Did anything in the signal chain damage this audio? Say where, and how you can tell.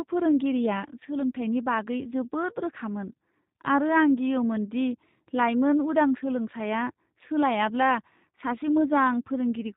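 Yes. The codec stage has marked the whole clip: this is G.729 (the sound fits G.729A at 8 kbit/s), and the damage is plainly audible. Nothing passes above 4 kHz, and the speech has a rough, synthetic edge because each 10 ms frame is rebuilt from a vocal-tract filter, a pitch predictor and a few pulses. A simple low-pass filter would dull the top end without that buzzy, rebuilt texture.

At the network stage there is VoIP packet loss concealed by the speech codec at about 4.17 s. The gap points to a single lost 10 ms frame. The decoder filled it by extending its last pitch and filter at lower gain, and it stays weak and coloured for a moment afterwards. That carry-over sets it apart from a dropout or click, which would be a hard silence or a step.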